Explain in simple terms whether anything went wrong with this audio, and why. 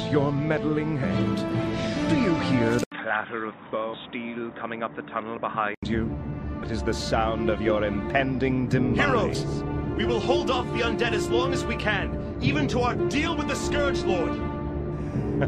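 A few things did go wrong. There's damaged data in a compressed stream: short blips at 1.02, 3.93, 6.62, 9.34 and 12.98 seconds, where the decoder hit scrambled bits, lost its place and skipped ahead to the next good chunk.

From 2.84 to 5.83 seconds the sound goes dull and boxy, with nothing above 3.8 kHz, a brief 80 ms gap at the start, a drop in level and faint new background noise underneath. The likely cause is the input switching to a poorer device.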